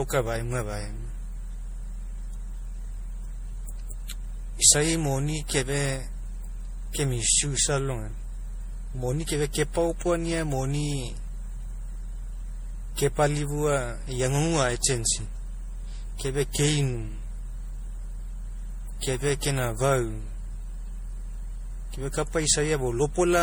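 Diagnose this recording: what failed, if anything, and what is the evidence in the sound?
Generation loss at the codec stage runs through the whole speech: swirly, hollow, smeared attacks, likely from about seven MP3 passes at 64 kbit/s, each adding fresh quantisation noise.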